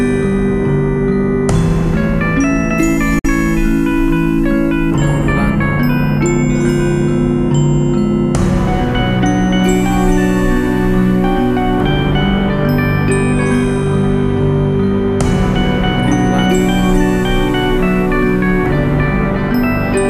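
At 3.19 s the receiver hit a digital broadcast dropout and muted. The sound fades out in 8 ms and stays silent until 3.25 s.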